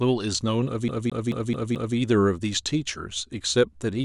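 CD stuck on one turn, 0.88 to 1.97 s: the pickup jumps back each revolution, replaying the same 0.22 s of speech five times as a rapid, even stutter.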